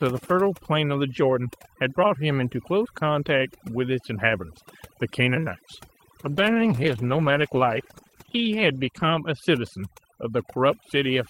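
From the start, overdone noise removal pulls individual frequency bands down whenever they sit near the estimated noise level, taking quiet parts of the speech with them. The background drops and breaks up into twinkling specks.

At 6.24 s a call bitrate drop sets in and lasts until 9.25 s, with the coarsest stretch holding for about 2.9 s. The encoder had fewer bits to spend, so high frequencies are cut and the speech turns rough and muffled. The sound points to a fall from roughly 32 kbps to about 13 kbps.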